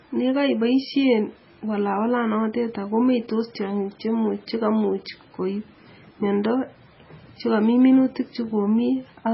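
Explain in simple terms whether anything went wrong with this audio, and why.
MP3 compression affects the whole clip, from start to finish. It likely comes from squeezing the file very hard. The encoder discards everything above 5.6 kHz and throws away quieter detail, so the speech sounds dull, watery and swirly throughout.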